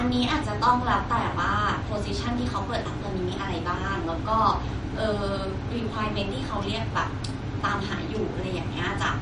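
From start to finish the speech has a watery, swirling texture, s sounds turn metallic, and nothing is heard above 10.6 kHz. That points to MP3 compression, likely at a low bitrate around 40 kbps. Short of bits, the encoder removed the treble above a fixed cut-off and dropped weak frequency components that flicker on and off between frames, while sharp onsets are smeared in time.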